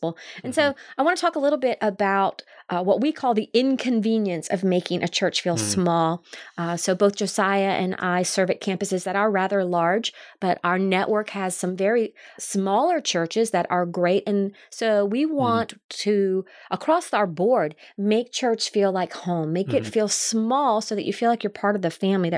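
Nothing goes wrong anywhere in this speech recording; there's no fault to point to at any moment.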